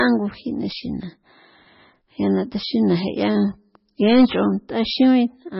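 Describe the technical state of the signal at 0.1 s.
At 0.1 s the speech already carries the heavy damage that runs through the whole clip: nothing comes through above 5.6 kHz, and the remaining sound has a watery, swirling texture with smeared onsets, pointing to a very low bitrate near 17 kbps. The likely cause is MP3 compression, where a starved encoder truncates the treble and drops weak frequency lines that flicker between frames. That flicker sets it apart from a plain low-pass filter, which would only dull the sound.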